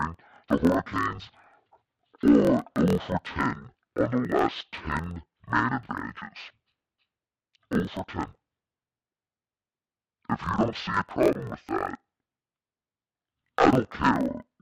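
Throughout the speech, interleaved audio read as planar splits each 24 ms block into half-speed left and right halves. Voices drop an octave, sounding dull and robotic with a 41.7 Hz buzz. Spectrograms show harmonics halved and vertical striping every 24 ms.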